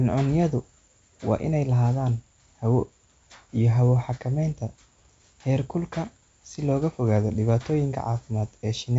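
Speech over G.722 wideband coding at 64 kbit/s, band-limited to about 7.7 kHz as that path implies, with no faults to report.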